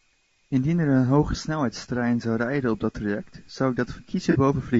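Low-delay AAC compression runs through the whole clip, likely from a low-delay codec such as AAC-ELD at a rate around 32 kbps. Its short frames blur the speech's harmonics, so the voice sounds plainly rough and grainy, with noise filling the gaps between harmonics.

AAC frame loss with concealment occurs from 4.31 to 4.36 s. The decoder patches the gap, which fits one lost frame of about 30 ms, by reusing the last good spectrum. The result is a brief smeared, noisy blur in the speech.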